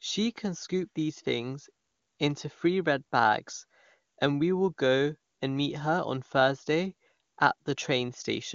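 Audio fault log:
No fault to log in this speech.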